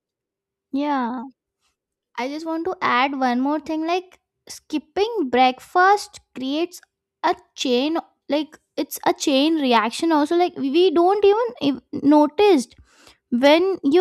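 No technical faults can be heard anywhere in the recording; the signal holds steady with nothing in its reproduction drawing attention to itself.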